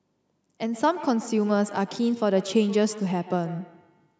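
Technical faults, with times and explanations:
0.72–4.2 s, feedback echo between two devices: from here to the end, the speech returns at a fixed interval of roughly 150 ms, each repeat thinner and more ringing, with the loudest about 15 dB below the speech. A second device in the room is replaying this microphone's signal, and the microphone picks it up again. Each echo canceller removes only its own device's playback, so the loop survives. Room reverberation would blur smoothly instead of repeating at a steady interval.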